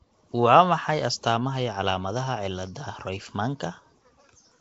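The speech was likely squeezed through Nellymoser compression, the old Flash microphone codec, working at a rate that fits a 32 kbps stream. The coder spends very few bits on each short block, so quiet bands are dropped and refilled with synthetic noise. Across the whole clip that leaves a rough, hissy halo around the speech and a smeared, underwater blur. The damage is plainly audible, and nothing remains above 7.8 kHz, so the top end sounds dull.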